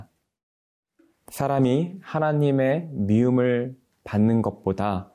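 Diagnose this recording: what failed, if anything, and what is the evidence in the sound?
No stage in the chain shows a failure; the speech signal arrives intact and continuous throughout.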